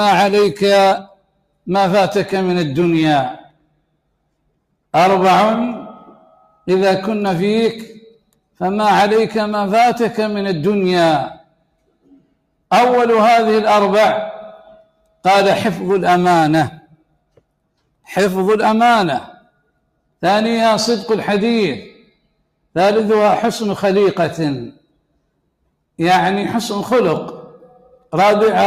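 Sound cut by the noise suppressor occurs at 1.04–1.67, 3.41–8.59, 11.34–12.62, 14.76–15.25, 16.8–19.99, 21.95–22.75, 24.72–25.64 and 27.72–28.13 s. Within each span, only part of the sound is affected, from about 0.3 s to about 1 s in total. The suppressor mistook parts of the sound for noise and pulled them down by about 19 dB at worst, or about 17 dB in the sixth span and 13 dB in the last. Those parts sink in level or have their tails clipped short.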